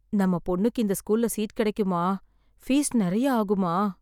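Nothing stood out on listening to this recording of speech.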